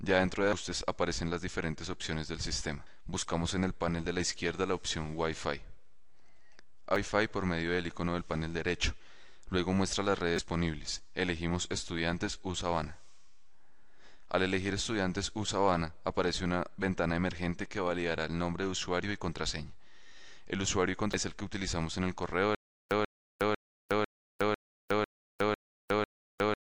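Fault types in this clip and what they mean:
Damaged data in a compressed stream: corrupted bytes made the decoder misread frames and resynchronise, heard as brief chirps or blips at 0.53, 2.86, 6.96 and 21.14 s, plus a longer one from 10.35 to 10.39 s.
Stutter with silent gaps: from 22.55 s to the end, a 137 ms fragment repeats eight times every 499 ms, each followed by about 362 ms of digital silence, likely a stalled stream replaying its last buffer and running dry.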